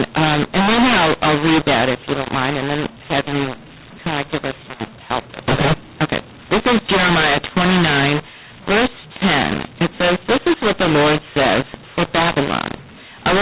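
Throughout, mu-law and A-law are mixed up. The A-law telephone audio is decoded as mu-law. Levels scramble, the speech sounds distorted, and pauses fill with noise.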